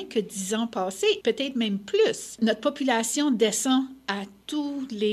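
No technical faults can be heard, so there is nothing to describe in time order.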